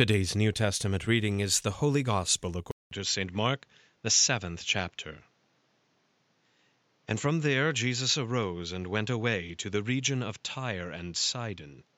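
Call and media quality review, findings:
At 2.71 s: 0.2 s dropout, then speech dull and boxy to clip end, a few dB quieter, with a new noise floor roughly 40 dB down. Spectrogram: energy stops sharply above 7.6 kHz. Likely input switched to a poorer device.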